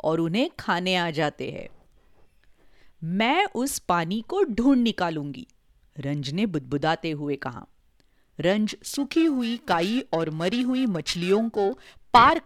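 From 8.68 s to the end of the clip at 12.46 s, the speech carries periodic clock jitter. The converter's sample clock is being shaken at a steady rate of around 1 kHz, so each spectral component gains sidebands spaced about that far above and below it, with the upper harmonics most affected. The result is a rough, metallic edge riding on the speech, which disappears whenever the signal falls silent.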